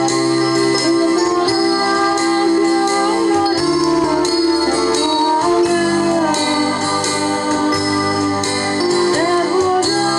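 Nothing is technically wrong with this audio.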